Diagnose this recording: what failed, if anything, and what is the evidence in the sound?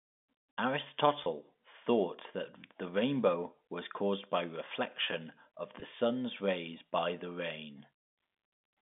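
Network stage: packet loss with pitch repetition at 1.24–1.26 s and 5.80–5.82 s in this telephone-band audio. Each gap is about 20 ms, which fits a single lost packet, and sounds like a brief held, buzzy tone as the receiver repeats the last pitch period to cover the gap.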